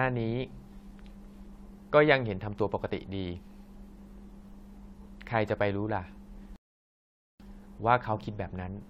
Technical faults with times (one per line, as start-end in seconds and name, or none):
6.56-7.40 rebuffering stall